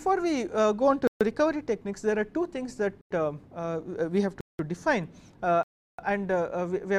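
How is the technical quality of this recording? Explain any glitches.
The recording has four clean breaks where the sound drops out completely. Each is a block of digital silence, at 1.07 to 1.21 s (134 ms), 3.01 to 3.11 s (93 ms), 4.41 to 4.59 s (186 ms) and 5.63 to 5.99 s (353 ms). Silence replaced the audio, either because the output buffer went unfilled in time or because a calculation produced invalid values. The 93 ms and 186 ms gaps fit 4096- and 8192-sample buffers. The sound stops dead and resumes with no fade or concealment, leaving true holes rather than a muffled or smeared dropout.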